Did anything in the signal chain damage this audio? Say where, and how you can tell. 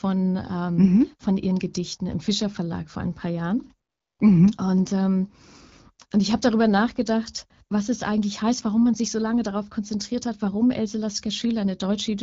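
Yes. From 3.89 to 4.19 s the codec's discontinuous transmission cuts in with AMR comfort noise. For 0.3 s no speech frames arrive, and the receiver fills the gap with smooth synthetic noise in place of the real background. Unlike a noise gate or dropout, that pause is a steady, featureless hiss rather than silence.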